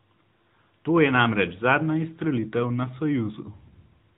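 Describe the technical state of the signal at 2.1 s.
AMR narrowband mobile codec damage at 2.1 s, as throughout the speech: audio is squeezed into an 8 kHz-sampled vocal-tract model with sparse pulse excitation per 5 ms subframe, cutting everything above 4 kHz and leaving a plainly audible buzzy, synthetic quality, which fits a higher-rate mode around 10 kbps.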